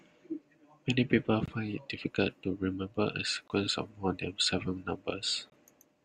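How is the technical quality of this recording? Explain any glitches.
The speech is interrupted three times by gap between chunks: short silent holes at 1.46–1.48 s, 3.48–3.50 s and 5.50–5.52 s. Each hole lasts about 21 ms and they repeat every 2.0 s, which suggests each chunk's playback starts late at the join.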